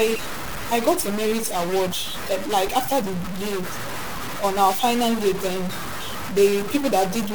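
Throughout, the speech has a harsh, buzzy edge and noise filling the pauses near -25 dBFS, likely a stuck bit offsetting samples.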